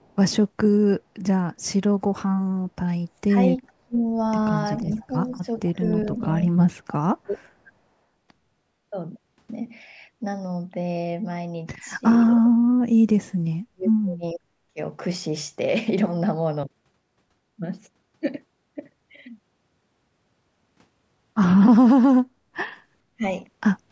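A speech recording in which the speech suppressed in double talk fault dips the level by as much as around 40 dB in pieces at 3.25–4.02, 4.96–7.72, 12.18–14.79 and 23.11–23.24 s. This is likely an echo canceller ducking while both ends talk. An echo leak brings a delayed copy 452 ms behind at 3.67–3.72 s, which is very faint, and at 5.58–6.08 s, which is about 20 dB down. It is set apart from reverberation by that fixed, discrete lag.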